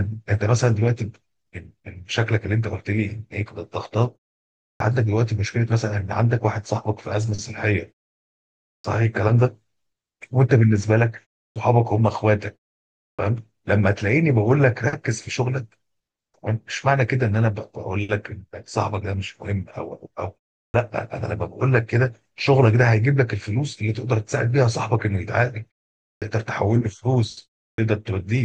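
Clipped start after a pause occurs at 4.76, 8.8, 11.51, 13.14, 20.7, 26.17 and 27.74 s in this speech recording. Each time, roughly 40 to 47 ms of the onset is missing, so speech jumps out of silence without its first sounds. The output device drops into a sleep state during gaps of 0.33 to 0.95 s and needs those tens of milliseconds to wake before playback resumes, while the pauses themselves fall quiet as expected.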